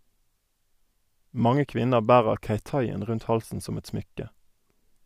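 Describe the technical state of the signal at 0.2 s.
At 0.2 s the speech signal is intact, with no audible technical fault at that moment.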